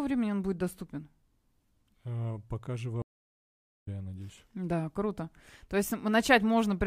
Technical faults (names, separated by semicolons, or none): stream reconnect